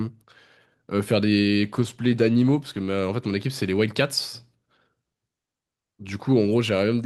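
From 1.64 s to 3.01 s the speech goes through a call bitrate drop. The encoder's budget is cut, and the sound fits a fall from 64 kbps to about 16 kbps, held at its lowest for about 1.3 s. The speech turns coarse and muffled, with the top end shaved off. Unlike packet loss, nothing drops out or stutters. The audio stays continuous, just thinner and rougher, then returns to full clarity after 3.01 s.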